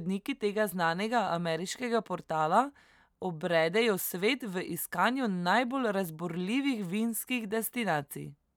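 No technical faults are audible.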